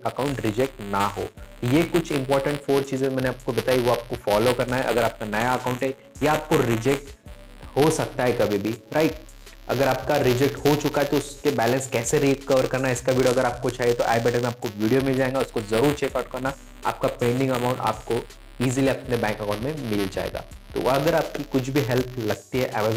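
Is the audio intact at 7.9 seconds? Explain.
No. At 7.9 seconds, as throughout the clip, a steady robotic buzz at 200 Hz rides on the sound. This is buffer tearing: writer and reader of the ring buffer have slipped, so a small slice of each roughly 5 ms period repeats audio from about 15 ms earlier, hard-joined on both sides.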